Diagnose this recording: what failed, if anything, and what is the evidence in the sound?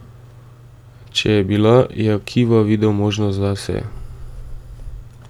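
Nothing in the signal chain failed: the speech stays continuous across the whole recording, with no audible defect pointing to any stage from capture to playback.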